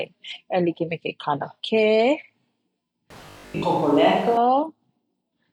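Speech with two faults in its second half. The close microphone's feed likely dropped out from 3.10 to 4.37 s, leaving a switch to a distant microphone: the voice turns hollow and roomy with thinner bass, and background noise rises to about 25 dB below the speech, though the overall level barely changes. Inside that stretch, from 3.26 to 3.64 s, new audio likely arrived too rarely and the software kept replaying its last buffer, skipping most of the real signal. The result is robotic sound from repeated short buffers, a rigid metallic 50 Hz buzz that fits a 20 ms buffer and only loosely follows the speech.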